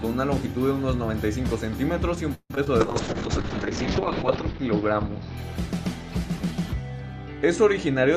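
Call audio freeze at 2.34 to 2.51 s: the sound stalls and is stretched into a continuation of its last moment, a buzz or hiss that fades and ends in about 50 ms of silence before the audio resumes where it stopped. Nothing is lost, but 155 ms of filler has been inserted, so everything afterwards runs that much later. The likely cause is packets held up in transit until the jitter buffer ran dry. Short concealed packet loss follows twice, at 2.55 to 2.57 s and 2.64 to 2.67 s. In each case about 10 ms of real audio never arrived in time. The receiver bridged the hole with 15 to 17 ms of synthesised sound, extrapolating pitch or shaped noise from what came before and then crossfading back, which is heard as a brief smear or wobble. Call bitrate drop from 2.81 to 6.18 s: the encoder's rate falls from 48 kbps to 7 kbps and stays at its lowest for about 1.1 s. With so few bits, Opus quantises far more coarsely and narrows its bandwidth from 20 kHz to 6 kHz, so the audio turns muffled and rough, with a watery texture, until the rate recovers.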